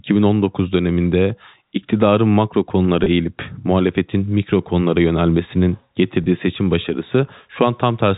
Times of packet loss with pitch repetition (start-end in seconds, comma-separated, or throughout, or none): 3.04-3.06, 6.24-6.26